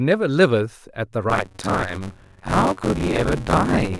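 From 1.29 s to the end of the speech, buffer tearing sets in. The writer and reader of the playback ring buffer have drifted so they cross within every period, leaving most of each block filled with audio from a few tens of milliseconds earlier, joined by hard edges. The result is a steady robotic rattle at about 93.8 Hz, which fits a 256-sample buffer. Unlike dropouts, the gaps hold stale sound rather than silence, and the buzz vanishes in pauses.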